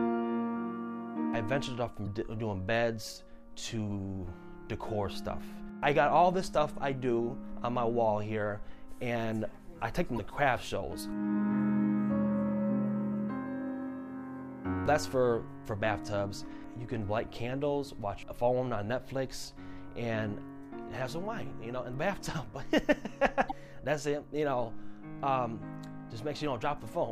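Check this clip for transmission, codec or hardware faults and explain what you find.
There are four short glitches from damaged data in a compressed stream, at 2.03 to 2.07 s, 10.15 to 10.20 s, 19.84 to 19.88 s and 23.47 to 23.52 s. Each lasts about 40 ms. Corrupted bytes made the decoder misread frames, lose sync and skip to the next valid frame header.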